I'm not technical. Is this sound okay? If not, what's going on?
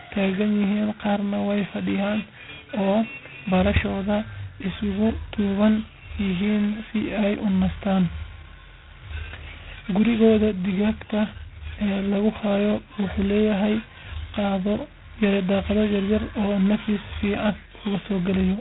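No. G.726 ADPCM damage runs through the whole recording. This phone-style coding saves each moment of speech as a rough guess at how it changes, so it carries a harsh, rasping hiss that rises and falls with the voice, and nothing above about 3.9 kHz survives.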